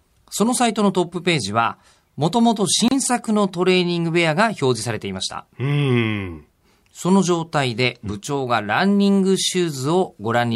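At 2.88 s the speech drops into a gap at a join of encoded pieces: a gap of about 31 ms from padding left untrimmed, showing as a flat waveform and a blank spectrogram column with smeared edges.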